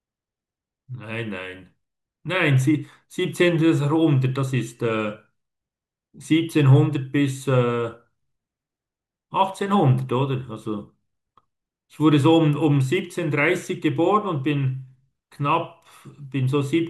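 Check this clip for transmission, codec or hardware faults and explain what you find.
No faults are audible.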